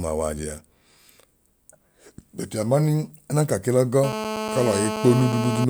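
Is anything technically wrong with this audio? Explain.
Yes. From 4.04 s to 5.65 s there is GSM phone buzz over the speech. A nearby 2G handset on a call transmits in bursts about 217 times per second, and the audio circuitry rectifies those radio pulses into a signal at that rate. The result is a hard, raspy buzz at 217 Hz, rich in harmonics and unrelated to the speech, holding nearly steady and sitting only about 6 dB below the speech level.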